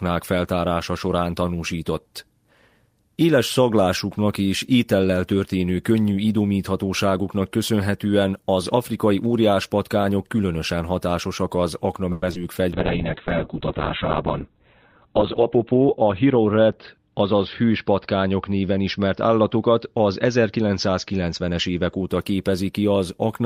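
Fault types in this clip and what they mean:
Repeated packet loss (robotic sound): several packets in a row went missing after "patkányok különösen hatásosak az" at 12.12 s, and last-sound patching leaves choppy, robotic speech.
Call bitrate drop: the encoder's budget fell from 32 to 6 kbps from 12.73 s, cutting the band to 4 kHz, so speech turns muffled and watery.
Jitter buffer speed-up: excess buffered audio was trimmed between 14.49 and 16.39 s, roughly a tenth of a second removed, so speech runs about 6% faster at unchanged pitch.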